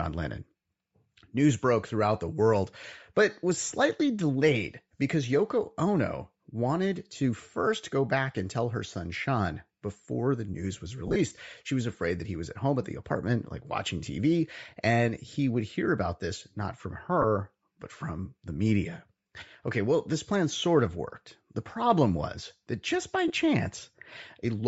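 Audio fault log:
throughout, Bluetooth LC3 compression: the speech has a breathy, grainy edge and the top of the band sounds hissy rather than crisp. That's likely LC3 running at a low rate, with the roughness consistent with around 32 kbps in 10 ms frames. At that rate the encoder drops much of the upper spectrum and refills it with noise, so you get that sandy texture instead of real detail.
11.08–11.17, 17.22–17.24 and 23.28–23.31, lost LE Audio frames: the first comes right after "before the news was" and is the worst, about 60 ms of gaps scattered over 80 ms, with the longest stretch around 30 ms. The other two are about 20 ms each, between "about this not from" and "but from the media", and after "was that just by". Each sounds like a short noisy smear, because the decoder keeps replaying the last spectrum with scrambled phase until real frames resume.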